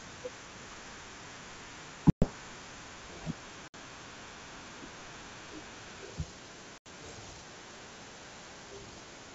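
Speech carried over a G.722 wideband link, which sounds clean apart from three dropouts. These are packet loss on an ADPCM call, at 2.10–2.30 s, 3.68–3.75 s and 6.78–6.87 s, with roughly 120, 60 and 80 ms of sound replaced by silence. Each hard-edged gap leaves the decoder's predictor and step size out of step with the sender's, so the speech returns slightly distorted before settling.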